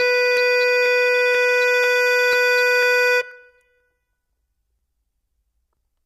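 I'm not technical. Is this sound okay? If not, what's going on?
No. Periodic USB or driver dropouts, from 0.37 s to 5.77 s: about every half second, roughly 10 ms of music is skipped, leaving a regular tick where something briefly blocked the audio connection.

Low-delay AAC compression, throughout: the music sounds rough and grainy, with a dull or artificial top end, likely from a call-style codec squeezing it into too little data.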